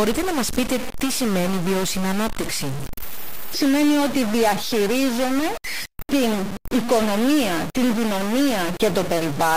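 Speech, harsh and buzzy throughout, with noise filling the pauses. The likely cause is a stuck bit, a high one, shifting about half the values by roughly -25 dBFS.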